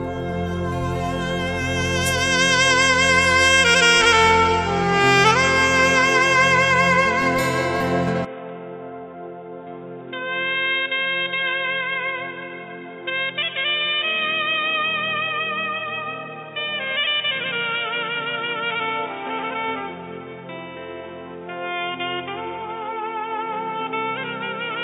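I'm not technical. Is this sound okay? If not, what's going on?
No. From about 8.25 s to the end, the recording likely switched its input to a poorer device, such as another microphone. The sound turns dull and boxy, with nothing above 3.8 kHz, gets noticeably quieter, and picks up a faint new background noise, with no gap at the switch.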